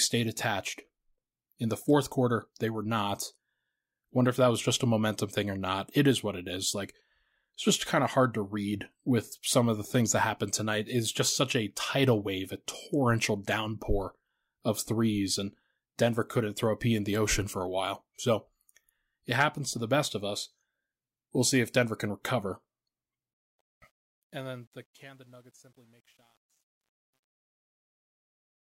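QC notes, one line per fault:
23.34–28.61 s, truncation distortion on the fade: as the fade-out from about 23.3 s sinks toward 28.6 s, the tail turns gritty, then from 24.52 s to the end it is at its roughest instead of thinning away cleanly. The level stage kept too few bits and added no dither, consistent with roughly 10-bit resolution, so near the bottom the waveform is forced onto a few coarse square steps.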